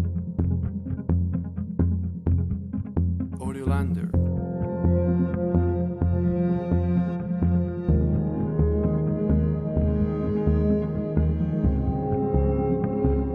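No technical faults are audible.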